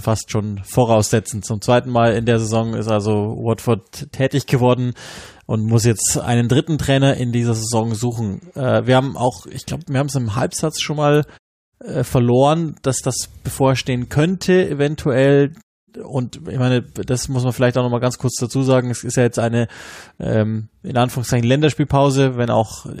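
Listening to this speech recording, nothing technical stood out as wrong.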